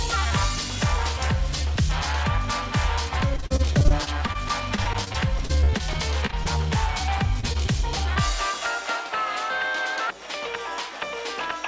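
The audio comes through a call path with nothing above 8 kHz, which fits a wideband codec like G.722. From 3.34 to 6.59 s there's repeated packet loss with that choppy, robotic sound: around thirty short holes, the longest 41 ms, each patched by stretching the previous sound, so roughly a fifth of that stretch is filler. It happens again from 7.40 to 7.76 s with four gaps of up to 25 ms. At 8.14 s a short concealed packet loss fills a 20 ms hole with a brief smear.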